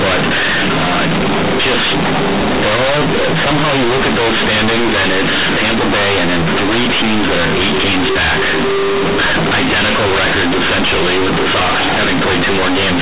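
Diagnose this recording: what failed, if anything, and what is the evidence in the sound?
Companded audio read as linear, throughout: a sample-format conversion fault. The G.711 A-law bytes are played as linear 8-bit samples without expansion, so each sign change swings about half the output range. Quiet and loud speech become equally large, heard as buzzy distortion and noisy pauses.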